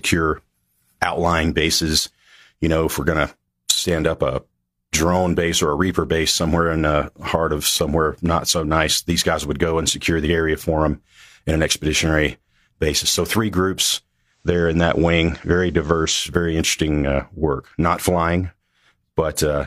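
Right after "three groups", at 14.24 s, the digital radio blends to analogue: it drops the digital stream and cross-fades over 322 ms to FM. Level shifts about 1 dB and faint hiss appears, until 16.36 s, before "interesting uh work".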